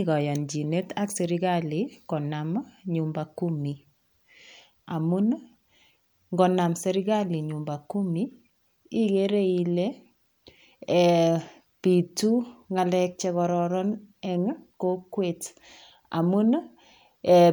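No technical faults are audible.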